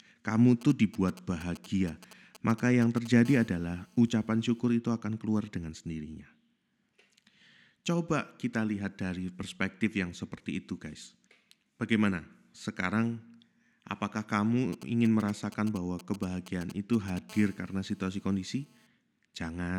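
From 0.61 to 3.07 s there are GSM signalling bursts, a nearby 2G phone's radio pulses rectified by the audio circuit into galloping ticks and short 217 Hz buzzes, roughly 20 dB under the speech. At 3.25 s it settles into a steady GSM phone buzz, a raspy 217 Hz tone full of harmonics at about -29 dB, which the phone keeps up through a call. It cuts out at 4.60 s, just before "itu akan keluar dengan". The same pair comes back later, with signalling bursts from 14.73 to 17.19 s and the steady buzz from 17.29 to 18.87 s.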